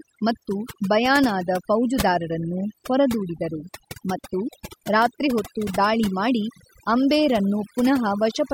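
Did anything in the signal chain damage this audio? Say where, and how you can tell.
Yes, at the processing stage: there's overdone noise removal running for the whole clip. Listen to the gaps between phrases and the background drops to near silence, broken by little twinkling specks. That's a noise reducer set far too hard, pulling individual frequency bands way down or shutting them off whenever they sit close to its noise estimate, and taking the quieter parts of the voice along with the noise.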